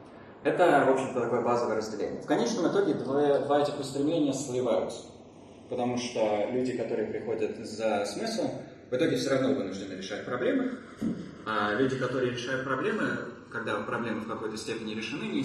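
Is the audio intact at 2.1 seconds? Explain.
No. Channels drifting apart runs throughout: a clock mismatch of roughly 50 ppm slides the delay, sweeping notches as slow flanging rather than a fixed comb.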